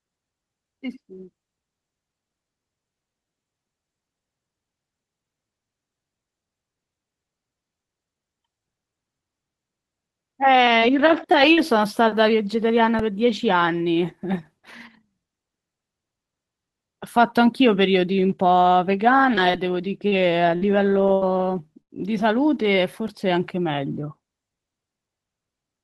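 At 10.79 to 10.84 s, 11.32 to 11.35 s and 11.53 to 11.59 s, short concealed packet loss leaves brief smears or wobbles. Each missing stretch of 20 to 40 ms was bridged by extending the preceding sound. On a spectrogram, harmonics run on too smoothly, then fade back into real detail.

Overlapping the ends of those holes, and again at 11.43 s, comes a lost packet rebuilt from error correction. Each is a 20 ms frame decoded from a low-bitrate copy carried in the following packet, so nothing drops out, but those instants sound grainier. A spectrogram shows noisier texture.

At 12.99 s, a repeated buffer gives a tiny click: a 1.45 ms slice played two extra times, which fits a 64-sample buffer. The waveform shows an identical short cycle copied end to end, with hard joins, and a thin vertical line marks it on the spectrogram.

From 19.35 to 21.91 s, repeated packet loss gives choppy sound with pieces missing. 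Six gaps, the longest 79 ms, were patched by continuing the last sound, covering about 11% of that span. The spectrogram shows repeated frozen, smeared patches breaking up the normal harmonic movement.

At 23.08 s, another repeated buffer plays the same 1.45 ms slice four extra times, producing a brief buzz rather than a single click. The waveform shows a short run of identical cycles. The band limit near 12 kHz and coding grain throughout fit the Opus call path.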